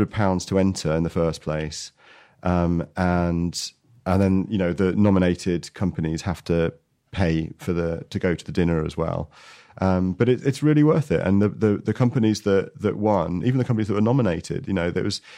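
At about 5.05 s the speech runs into hard clipping for roughly 0.19 s, ending around 5.24 s. The level pushes about 2 dB past what the stage can pass, so the peaks get sliced flat, and that shows up as a brief crackly edge on the loudest moments.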